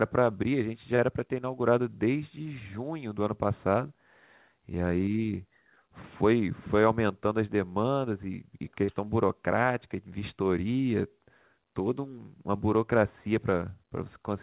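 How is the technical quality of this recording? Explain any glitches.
The recording has two brief glitches, both short concealed packet loss. The audio is band-limited with nothing above 4 kHz, which fits a G.711 mu-law call path at 64 kbps. The first glitch runs from 0.96 to 1.00 s, with about 20 ms filled in. The second runs from 8.84 to 8.90 s, with about 42 ms filled in. In each case a bit of audio arrived too late for the decoder. The receiver extended the preceding sound to cover the gap, then blended back in. Each one is heard as a short smear or wobble.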